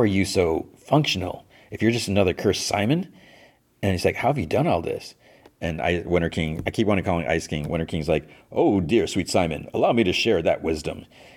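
At 2.07 s a sharp broadband tick peaks at about -30 dBFS, a bit error spike: one flipped bit briefly knocked a few samples off.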